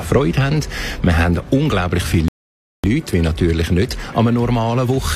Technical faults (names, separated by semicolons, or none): rebuffering stall